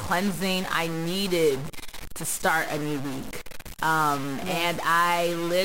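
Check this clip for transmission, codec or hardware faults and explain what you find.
A stuck bit runs through the whole speech clip. One data bit is likely stuck at 0 or 1, from a broken line or converter. Each sample whose true value differs in that bit is pushed off by the bit's weight, a step of around -30 dBFS. Which samples are hit depends on the waveform, so the error follows the speech as distortion. Because that bit also flips with the sign of small values, the pauses fill with noise instead of falling quiet.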